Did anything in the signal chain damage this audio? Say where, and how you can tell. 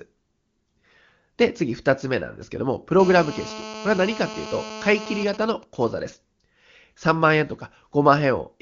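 Yes. From 3.00 to 5.24 s a hard, raspy GSM phone buzz sits about 13 dB below the speech, with a 217 Hz fundamental and a dense harmonic stack unrelated to the speech. A nearby 2G phone in a call is bursting RF, and the analogue wiring or mic preamp rectifies those pulses into audio.

From 5.27 to 6.00 s the steady buzz gives way to GSM signalling bursts, even ticks with a longer 217 Hz buzz twice a second, roughly 20 dB under the speech. The phone is still in the call but its user has gone silent, so it transmits only short burst groups, which the same analogue stage demodulates.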